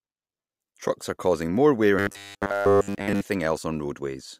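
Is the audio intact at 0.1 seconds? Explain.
Yes, at 0.1 seconds the speech plays through cleanly with no dropout, click, distortion or other fault.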